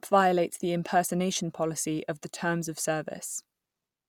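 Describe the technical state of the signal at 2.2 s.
At 2.2 s the speech signal is intact, with no audible fault at that moment.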